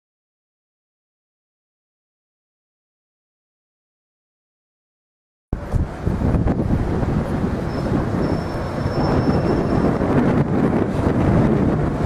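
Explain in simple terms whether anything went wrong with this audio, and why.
Nothing went wrong with this recording. There is no point where the sound cuts out, jumps or gets damaged.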